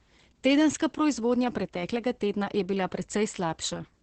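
Heavy Opus voice compression runs throughout, leaving the speech muffled and hoarse, which fits SILK coding near 10 kbps. A spectrogram shows a hard ceiling at 8 kHz.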